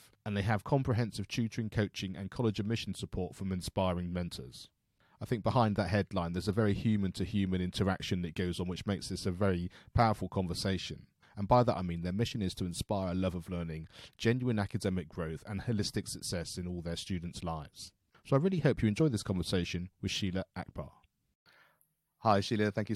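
No technical faults can be heard anywhere in the recording.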